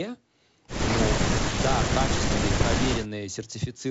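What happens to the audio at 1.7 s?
Nothing goes wrong at 1.7 s: the speech there comes through intact, carried by G.722 wideband coding at 64 kbit/s, which keeps the band up to about 7.7 kHz.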